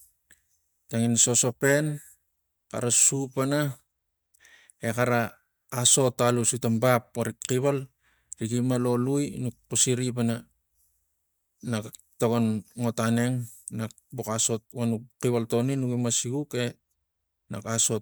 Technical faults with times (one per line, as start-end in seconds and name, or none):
none